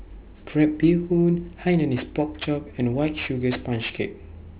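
Aliasing runs through the whole speech clip. The sound points to a drop from 16 kHz to 8 kHz sampling with no low-pass filter applied first. Energy above the new 4 kHz limit was not removed. It folded back below 4 kHz at wrong, unrelated frequencies. The folded energy sits roughly 20 dB under the signal. Sibilants come out gritty and metallic. The spectrum stays full right up to the 4 kHz edge.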